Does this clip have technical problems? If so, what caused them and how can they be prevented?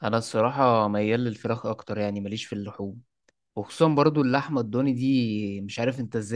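No, nothing in this speech recording points to a technical fault, so there is no cause to trace and nothing to prevent.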